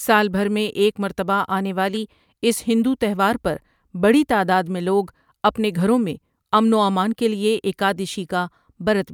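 No technical faults occur anywhere in the recording.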